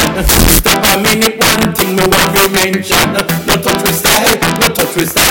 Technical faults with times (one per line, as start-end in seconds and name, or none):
0.00-5.31 integer overflow
4.08-5.22 train of clicks